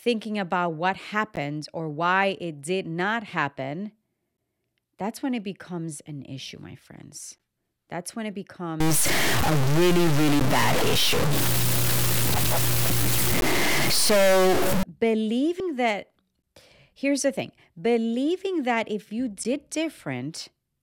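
Speech, broken by gaps between chunks: seven hard-edged holes of about 13 ms at 1.36 (after "thinking about what", before "or why it did"), 4.37, 7.38 (after "an issue my friends"), 10.40, 13.41, 16.42 and 19.44 s (after "believing that if you"). They fall exactly every 3.0 s, so they come from chunk joins rather than random dropouts. From 8.80 to 14.83 s a distortion rides on the sound, and the pauses fill with noise instead of going quiet. That points to a stuck bit, likely a broken data line or converter. Plain clipping would leave the pauses clean. At 15.60 s a brief blip marks damaged data in a compressed stream, where the decoder loses sync and jumps to the next frame. Unlike the chunk gaps, it happens only once and does not fall on the 3 s grid.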